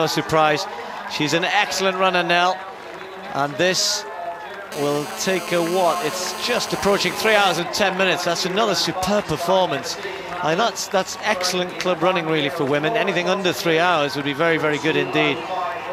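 From 4.72 to 7.59 s a hard, raspy buzz sits on top of the audio, pitched at about 217 Hz (216.7 Hz) and thick with harmonics. It holds steady for that whole stretch at about 12 dB below the signal and bears no relation to it. This is GSM phone buzz: a nearby 2G phone on a call transmits in radio bursts at that rate, and the audio circuitry rectifies each pulse into sound.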